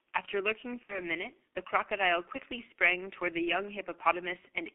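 The speech passes through a G.723.1 codec for its whole length. This low-rate telephony coder works in 30 ms frames, and the thin, coarse result fits its roughly 6 kbit/s mode. The line band runs from about 300 Hz to 3.7 kHz, so the low body and all the upper air are gone. The coarse, slowly updated voice model damages the sound heavily: it comes across muffled and hoarse, with smeared consonants. From 0.83 to 1.03 s there is VoIP packet loss concealed by the speech codec. About 60 ms of audio never arrives, which fits two lost codec frames. The decoder fills the gap by continuing from its last pitch and filter state while turning the level down, so the speech stretches into a fading sound. Because each frame depends on the one before, the speech stays weak and distorted for a short stretch after real data resumes, up to about 1.03 s.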